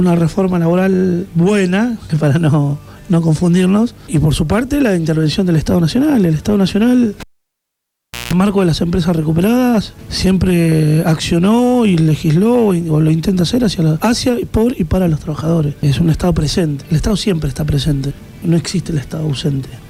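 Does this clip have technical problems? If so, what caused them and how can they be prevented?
Yes. From 7.20 to 8.33 s a cable was pulled and plugged in while live: a pop, about 1.08 s of near silence, then 0.17 s of 60 Hz mains buzz as the tip made contact, and a second pop. Mute or power down the channel before changing connections.

Short concealed packet loss occurs at 14.31 to 14.35 s, where about 20 ms of audio arrived too late and the receiver synthesised a brief smeared fill before blending back. A steadier network path or a larger jitter buffer prevents this.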